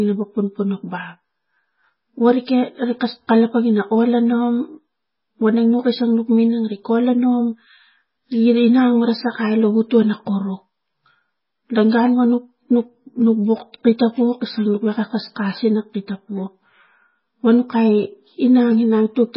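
Throughout, the speech has nothing above 5.6 kHz and sounds watery and swirly, with smeared attacks. Heavy MP3 compression, likely near 16 kbps, starved the encoder of bits.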